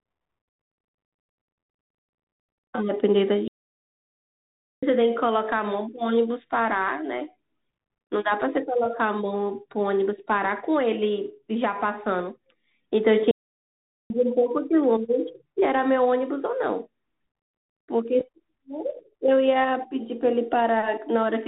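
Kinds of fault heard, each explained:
Bluetooth CVSD headset codec: The speech runs through the one-bit, adaptive-step codec used by phone headsets, with nothing getting through above about 3.8 kHz. The damage is plainly audible: s sounds turn scratchy, loud bright bits distort, and a grainy hiss sits underneath. That fits a 64 kbps link.
Playback stall: The speech just stops dead twice, from 3.48 to 4.83 s (about 1.35 s) and from 13.31 to 14.10 s (about 0.79 s), then carries on. The likely cause is the player starving for data or its thread getting blocked, leaving the output silent until it caught up.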